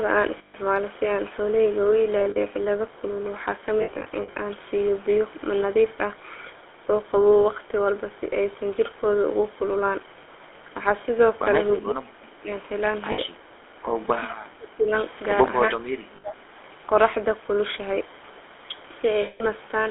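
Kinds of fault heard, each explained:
GSM full-rate codec: throughout the speech, the 13 kbps GSM full-rate coder rebuilds the voice from a vocal-tract model excited by sparse regular pulses. The line is limited to 300 Hz to 3.5 kHz, and the result is a plainly audible buzzy, gravelly roughness.
Lost GSM frames: at 0.38–0.55, 2.2–2.39, 3.82–4.35, 13.12–13.21, 16.16–16.25 and 19.22–19.43 s, missing frames are filled by repeating the last good one. Each gap becomes a brief rough, metallic ring, scattered in places, lasting up to about 180 ms.
Speech suppressed in double talk: at 11.81–12.5, 14.21–14.92 and 15.7–16.57 s the voice dips by up to about 25 dB, for roughly 0.7 to 1 s each time. This is likely an echo canceller turning the talker down while both sides spoke at once.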